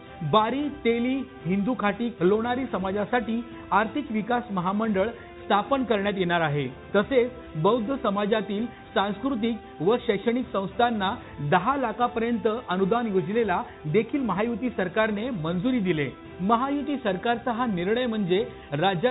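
Nothing stood out on listening; the sound comes over a call path with nothing above about 4 kHz, which fits a narrowband G.711 mu-law connection.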